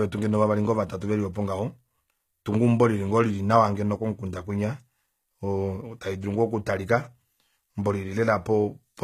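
HE-AAC compression runs throughout the speech. The treble sounds gritty and metallic, and s sounds come out lispy. This is likely an encoder coding only the lower spectrum and rebuilding the top by copying bands upward, with damage plain enough to suggest roughly 20 kbps.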